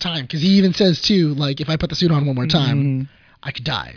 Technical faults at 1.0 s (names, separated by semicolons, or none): none